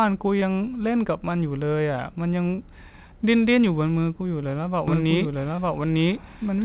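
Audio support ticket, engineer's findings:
Short concealed packet loss at 0.40–0.43 s, 2.55–2.60 s and 5.56–5.60 s. Brief smears or wobbles where the decoder lacked data and extended the preceding sound, from its pitch or as shaped noise, then crossfaded back. Component: network/jitter buffer on the call path. Band-limited to 4 kHz, consistent with G.711 mu-law.

Doubled audio track from 4.88 s to end. A full-band copy of the speech trails roughly one second behind at about equal level, starting abruptly, with no decay or room colouring. Likely cause: second capture via a slower path, or an edit leaving two copies out of step.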